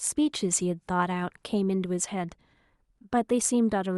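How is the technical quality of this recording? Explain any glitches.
No glitches to explain: nothing audible in the speech recording points to a technical fault.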